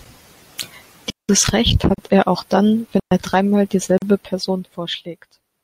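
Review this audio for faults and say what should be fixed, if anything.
Two digital wireless dropouts interrupt the speech, at 1.10 to 1.29 s (a mute of about 190 ms) and at 3.00 to 3.11 s (about 120 ms), the second just after "er auch dann". In each, the receiver lost too much data and muted with a very quick fade. The result is a clean hole of near silence with no crackle or noise burst on either side. A waveform shows a flat, near-zero stretch with steep tapered edges. A spectrogram shows a blank vertical band across all frequencies. Improving the radio link fixes this: keep line of sight, shorten the transmitter-to-receiver distance and move away from interference.

Two gaps at a join of encoded pieces also occur, at 1.94 to 1.98 s (36 ms), just before "er auch dann", and at 3.98 to 4.02 s (40 ms). Their 2 s spacing fits a stream built from separately encoded 2-second pieces joined without trimming. 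Each piece keeps the encoder's start-up delay and end padding, so brief silences open in continuous speech, and the speech resumes where it stopped. On a waveform these are thin flat slots with slightly smeared edges. A spectrogram shows narrow empty columns at regular intervals. To prevent them, trim encoder delay and padding using gapless metadata, or encode the material as one continuous stream.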